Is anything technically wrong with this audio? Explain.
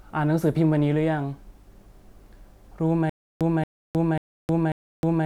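Yes. From 3.10 s to the end, there is stutter with silent gaps. A 229 ms burst repeats four times with 312 ms of digital silence between each, likely a stalled stream replaying its last fragment.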